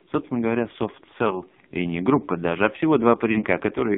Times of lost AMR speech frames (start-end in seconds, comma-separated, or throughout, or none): 1.28-1.42, 3.32-3.44